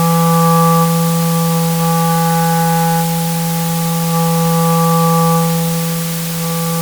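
Throughout, the audio is quantized to very low bit depth with dither, which fits 4-bit resolution, leaving a steady, even hiss only about 10 dB below the sound, without distortion.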